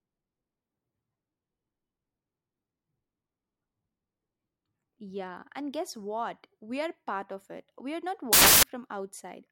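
A speech recording that bursts into loud, harsh broadband noise from 8.33 to 8.63 s, a fault of samples built from the wrong bytes. For those 0.3 s the reader assembles each sample's bytes out of order or misaligned, so the rapidly fluctuating low bits become the dominant part of every value. On a spectrogram the stretch is a solid block of energy across all frequencies; the waveform jumps to dense hash throughout.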